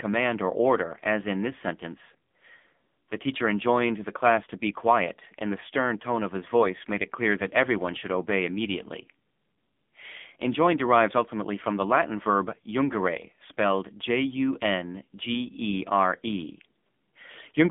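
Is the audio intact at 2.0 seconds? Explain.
No. At 2.0 s, as throughout, the speech has passed through the AMR narrowband mobile codec at a heavy setting that fits a 6.7 kbps mode. The pulse-driven vocal-tract model leaves the voice buzzy and synthetic, squeezed into a 200 Hz to 3.5 kHz line band with nothing above 3.6 kHz.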